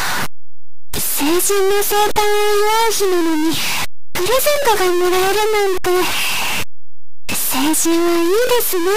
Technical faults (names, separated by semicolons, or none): stuck bit